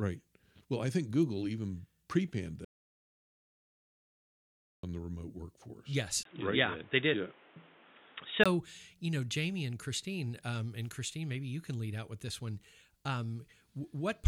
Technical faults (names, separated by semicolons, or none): audio dropout to silence; input switched to a poorer device